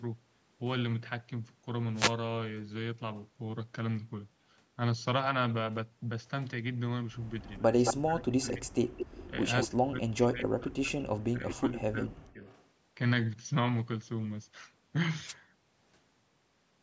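Speech recorded through call processing that passes nothing above 8 kHz. Wireless microphone noise hits appear as brief static swishes at 1.94–2.14 s and 15.26–15.34 s, where the FM radio signal faded and receiver noise rose. Echo leak returns a copy of the far side delayed by about 218 ms at 7.44–7.94 s (roughly as loud as the speech), 8.97–9.28 s and 9.62 s (about 10 dB down), then 12.44–12.66 s (about 242 ms, faint), likely from a loudspeaker-side echo canceller missing part of its pickup. Speech suppressed in double talk shows as the talker dropping by roughly 30 dB at 7.6–8.73 s, slightly at 9.3 s, and by up to about 35 dB across 9.73–12.45 s, likely the canceller ducking both voices during overlap.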